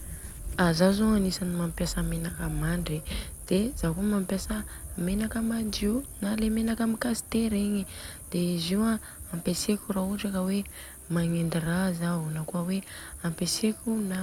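Nothing in this speech recording stands out as a technical fault; it comes across as a straightforward, untroubled recording.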